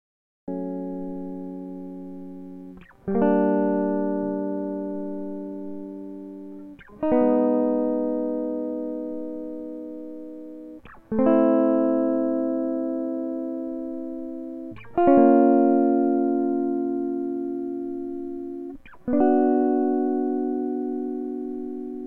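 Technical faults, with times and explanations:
0.00–0.48 s, cut-off start: the music is preceded by digital silence, and at 0.48 s it appears abruptly in the middle of an ongoing sound rather than beginning with an attack or fade-in. Capture began late, after the music was already playing, so whatever came before that point was never recorded. The sudden jump from nothing to full level, with no natural onset, is what makes the start sound chopped off.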